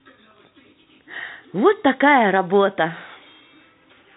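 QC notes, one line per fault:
No faults to log for this speech clip, which carries the band-limited sound of G.711 telephone coding with nothing above 3.8 kHz.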